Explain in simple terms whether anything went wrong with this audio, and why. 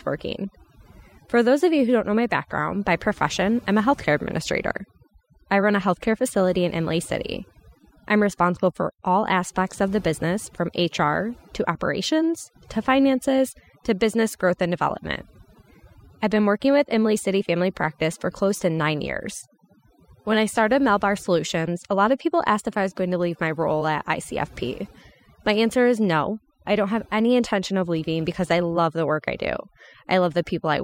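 Something did go wrong: the clip suffers from overdone noise removal, heard from start to finish. A cleanup tool was pushed too hard, so in the gaps between phrases the background drops to near silence sprinkled with twinkling specks. Unlike a simple noise gate, which shuts everything off at once, this tool mutes narrow slices of sound one by one, taking quiet parts of the voice along with the noise.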